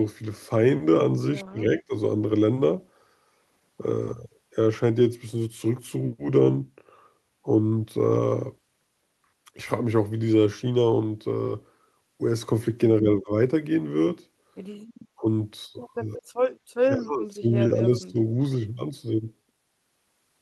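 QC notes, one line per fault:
1.43–1.94, 13.0–13.32, 15.2–15.25, 15.97–16.2, 16.96–17.47 and 17.75–18.18 s, speech suppressed in double talk: the voice ducks, by about 25 dB at worst and only slightly at 15.2 s. The likely cause is the echo canceller failing to separate the near talker from the far-end echo during overlapping talk and pulling the near talker down with it.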